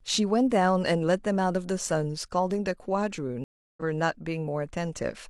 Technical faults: stream reconnect

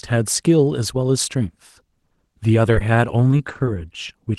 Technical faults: repeated packet loss (robotic sound); short concealed packet loss

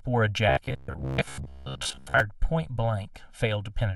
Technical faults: channel delay (comb filtering); robotic sound from repeated short buffers

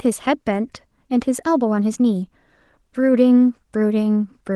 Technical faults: none

